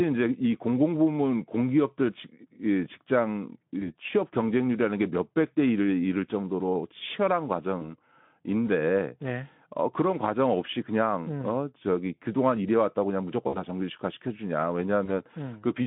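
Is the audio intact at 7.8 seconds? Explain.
No, a single 20 ms voice packet was lost around 7.79 to 7.85 s, and the decoder's packet loss concealment extrapolated it, leaving a brief, fading buzz or coloured noise.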